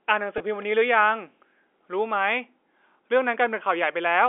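Speech over a narrowband telephone line shows a brief packet loss with pitch repetition from 0.38 to 0.40 s. About 20 ms, which fits a single lost packet, is bridged by repeating the last pitch period, giving a slightly held, buzzy sound rather than the silent gap or click of a plain dropout.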